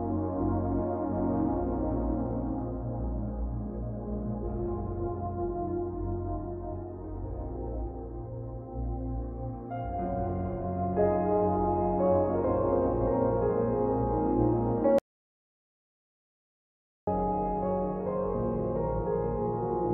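The sound cuts to complete silence at 14.99 s and resumes at 17.07 s, an audio dropout to silence lasting about 2.09 s in which whatever was happening is lost and no room tone remains. On a waveform this shows as a flat line; on a spectrogram, a fully black vertical band with abrupt edges. The likely cause is the input being lost, through a disconnected device, a failed link or a mute, while recording carried on writing silence.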